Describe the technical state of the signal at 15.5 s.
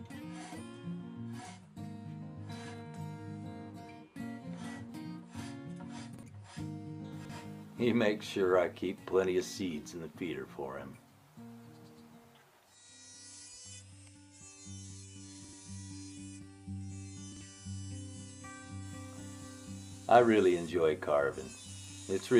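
At 15.5 s there are chunks out of order, spanning 15.45 to 15.53 s. A block of about 43 ms arrived late by one chunk and plays after the block that should follow it, so two adjacent pieces are swapped. Nothing is missing, but the moment sounds briefly jumbled. The waveform shows three hard joins where the shape jumps abruptly, and the spectrogram's patterns break and resume out of sequence across that 86 ms stretch.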